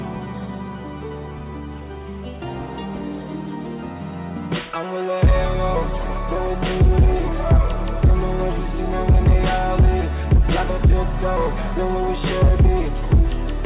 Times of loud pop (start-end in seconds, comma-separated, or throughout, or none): none